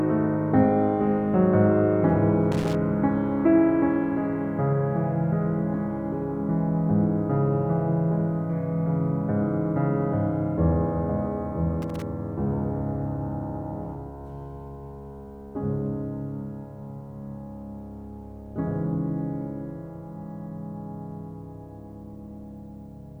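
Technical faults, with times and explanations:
2.52–2.75 s and 11.82–12.02 s, loose connector crackle: two short, ragged bursts of scratching cut into the music, each about a fifth of a second long. That's a worn or dirty contact somewhere in the chain briefly shifting, so the signal keeps dropping in and out faster than you can follow. The rapid chopping, plus little pops from any DC on the line, is what gives it that irregular crackly texture rather than a clean dropout.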